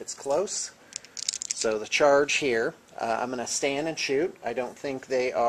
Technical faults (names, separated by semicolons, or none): none